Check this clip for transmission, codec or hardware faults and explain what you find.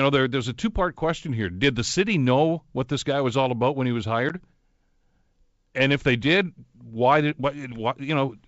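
One transmission fault is audible, a single dropout from packet loss on an ADPCM call, in speech carried over G.722 wideband coding. Just after "about when he was", between 4.29 and 4.33 s, about 10 ms of audio, roughly one packet, drops to silence. The receiving decoder's adaptive predictor and step size then no longer match the sender's, so the speech resumes slightly distorted and settles by 4.33 s. A waveform shows a flat-line gap with vertical edges, and a spectrogram shows a narrow blank column.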